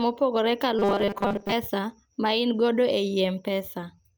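From 0.79 to 1.53 s the speech turns into a rigid, metallic buzz at 200 Hz that only loosely tracks the words: robotic sound from repeated short buffers. The likely cause is audio arriving too rarely, so a 5 ms slice is looped to fill most of that stretch while the real audio is skipped.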